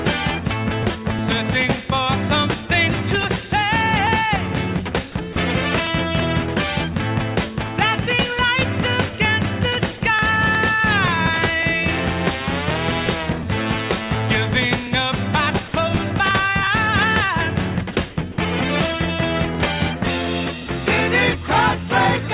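At 5.33, 15.68, 17.93 and 18.32 s the sound gives way for 30 to 60 ms to flat, steady noise, likely sound dropped by the voice detector and filled with comfort noise. Unlike packet-loss concealment, nothing is repeated or smeared, and the sound returns when the detector triggers again.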